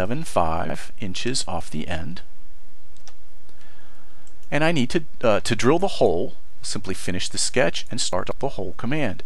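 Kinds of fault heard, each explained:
Chunks out of order: one 46 ms block plays late, by one block at 0.65–0.74 s and by three blocks at 8.13–8.31 s, giving jumbled moments. Waveform shows abrupt steps at the joins.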